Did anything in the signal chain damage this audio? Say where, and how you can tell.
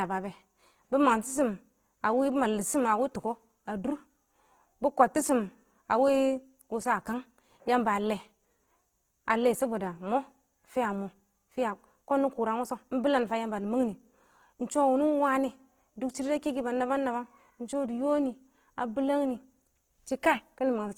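Yes. Throughout, the speech sounds grainy and rough, its tonal parts turned noisy, while the band still reaches about 20.2 kHz. That points to the codec: likely Opus compression in CELT mode, filling starved bands with noise or folded content, which fits a 16 kbps rate.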